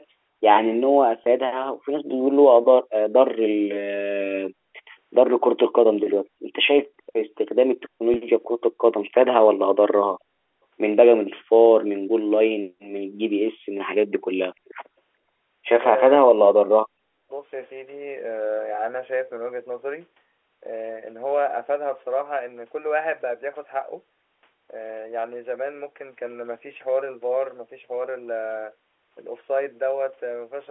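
Packet loss with pitch repetition occurs at 1.24 to 1.26 s and again at 8.14 to 8.16 s. Each time a single 20 ms stretch of the stream went missing, and the receiver filled the hole by replaying the last pitch cycle it had. Because the gap is so short, nothing fades to silence. The sound briefly holds on one buzzy, slightly mechanical tone before normal speech picks up again.

An echo leak shows up at 6.98 to 7.02 s, 8.43 to 8.48 s and 14.65 to 14.75 s: faint, delayed copies of the speech arriving 439 ms after the original. The first is very quiet, roughly 40 dB down, and the later two are louder at about 30 dB below the speech. These are likely leftovers that a loudspeaker-side echo canceller failed to subtract and sent back down the line. They come through as brief scraps rather than a sustained echo.

Background gated by the echo canceller appears at 12.9 to 13.03 s, about 150 ms in all. 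While the far end was playing through the loudspeaker, the canceller clamped the microphone down hard, pulling the room sound down by about 40 dB. The ambience audibly drops out into near silence and then snaps back once the canceller releases.

Speech suppressed in double talk follows at 16.19 to 16.51 s and 16.88 to 17.31 s, roughly 300 ms and 400 ms long. With both sides active at once, the likely cause is the echo canceller mistaking the local talker for loudspeaker echo and attenuating everything. The speech sinks by as much as roughly 40 dB, so it dips sharply before recovering. All of this sits within the usual narrow telephone band of the G.711 line.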